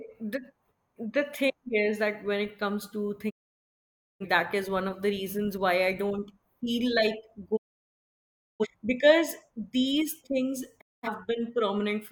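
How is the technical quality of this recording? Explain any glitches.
The speech is interrupted three times by digital broadcast dropouts, at 3.29–4.25 s, 7.55–8.66 s and 10.80–11.08 s. Each time the receiver lost valid frames and muted, fading out over about 20 ms. The audio goes silent for roughly 0.9 s, 1.0 s and 0.2 s, and the speech from those stretches is lost.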